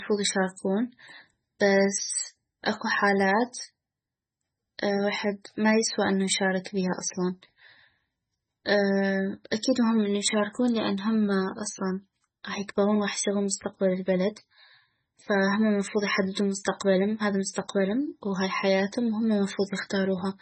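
Throughout the speech, heavy MP3 compression is likely: nothing above about 8.3 kHz survives, and starved bits leave watery, swirling artefacts on sibilants and smeared attacks, consistent with roughly 16 kbps.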